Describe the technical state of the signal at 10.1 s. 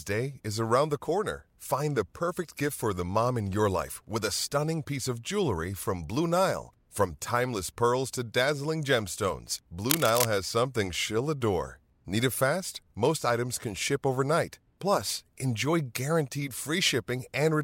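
A worn cable, connector or control carrying DC was likely moved, making its contact resistance jump. The result is cable scratch noise from 9.90 to 10.26 s, right after "pearls to dazzling gemstones": dense, uneven scratching roughly as loud as the speech.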